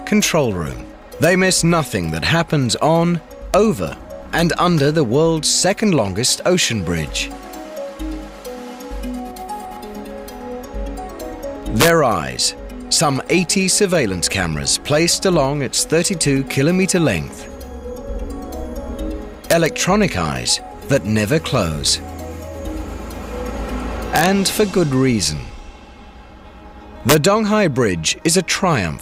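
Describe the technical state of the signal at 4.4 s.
At 4.39 s a single integer overflow occurs: a peak reaching the top of the integer range wraps to the opposite sign instead of being held there, producing one violent, sharp crack. Clipping would flatten that peak and sound duller, with no full-range jump.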